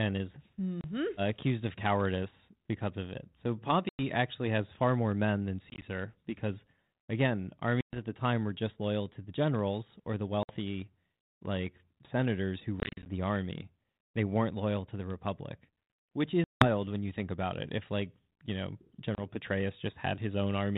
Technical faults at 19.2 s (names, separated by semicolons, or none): packet loss on an ADPCM call